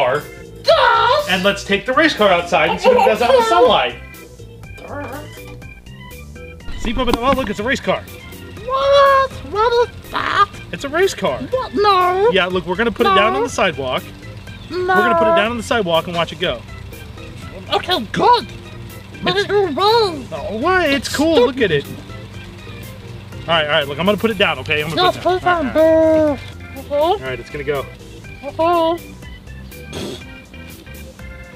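A screen or video cable is coupling into the audio path for the whole clip, producing video or display buzz: a 60 Hz buzz at the picture's field rate, with a layer of hash above it, sitting roughly 30 dB below the wanted sound.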